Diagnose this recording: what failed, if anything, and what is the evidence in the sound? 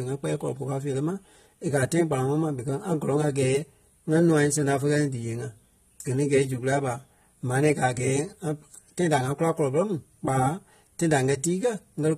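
AAC compression throughout, at the codec stage: nothing above 14.1 kHz, with plainly audible smearing in the speech, likely from a low-bitrate encode around 32 kbps quantising each frame coarsely.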